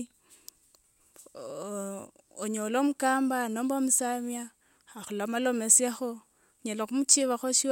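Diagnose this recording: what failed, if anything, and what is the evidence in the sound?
Nothing failed; no stage shows an audible fault here.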